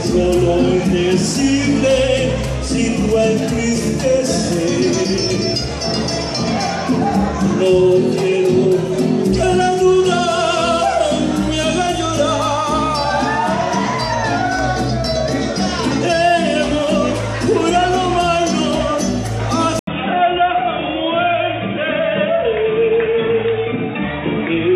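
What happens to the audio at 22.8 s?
The input likely switched to a poorer device at 19.79 s. From that 80 ms gap to the end, nothing above 3.8 kHz passes, so the sound turns dull and boxy.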